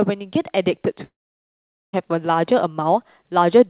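Speech, carried over a call path with nothing above 4 kHz, which fits a narrowband G.711 codec. From 1.04 to 1.95 s the sound breaks off. The last sound stretches into a fading buzz. Near silence follows for roughly 0.8 s. The audio then resumes with that stretch missing. The likely cause is a long network dropout, with the receiver papering over the gap.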